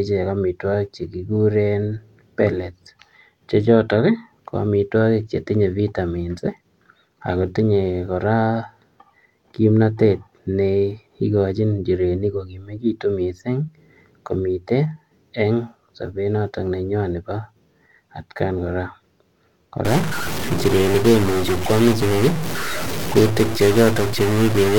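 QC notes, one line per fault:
19.85 s to the end, stuck bit: noise filling pauses, likely one data bit held fixed, pushing about half the samples off by its weight.
20.94 s, compressed frames skipped: a short jump where about one frame, some 20 ms of audio, went unplayed; the audio skips ahead by that length.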